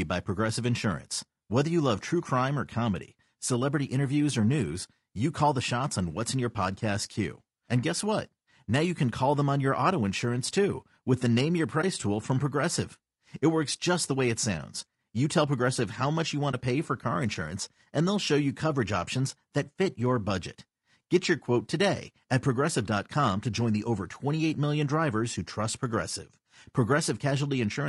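A speech recording with two kinds of fault. The whole clip has plainly audible coding damage, likely from low-delay AAC compression of the AAC-ELD kind used for video calls. The voice sounds rough and grainy. Noise fills the gaps between the pitch harmonics. The top band sounds thin and artificial. Short frames cannot separate the harmonics well, and they need more bits. The sound fits a low bitrate near 32 kbps, which cannot cover that cost. Two brief dropouts show AAC frame loss with muting. They sit at 11.81 to 11.84 s and at 16.51 to 16.54 s. Each hole matches about one lost frame, about 20 ms of audio. The decoder zeroed the missing spectrum. The overlapping windows then faded the sound out and back in. This leaves a soft-edged gap rather than a hard cut.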